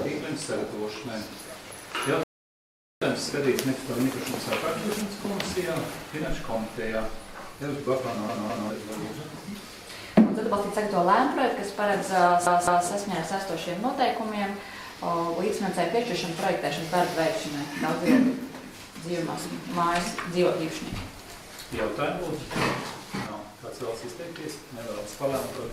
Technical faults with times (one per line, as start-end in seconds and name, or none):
2.23-3.02 rebuffering stall
8.29-8.70 CD stuck on one turn
12.46-12.88 CD stuck on one turn
23.27-25.72 sudden gain jump